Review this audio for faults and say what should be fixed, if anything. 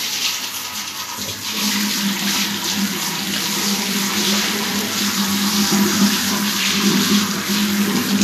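Vorbis compression, throughout the clip: the audio has a hissy, grainy quality, with roughened tones and softened attacks, and nothing is present above 14.2 kHz. This is likely lossy Vorbis encoding at a low setting, consistent with roughly 36 kbps. The encoder keeps a smooth spectral outline but quantises the treble so coarsely that fine detail turns into noise of similar energy, while the high band is removed entirely. To prevent this, work from an uncompressed or lossless source, or re-encode at a substantially higher Vorbis quality setting.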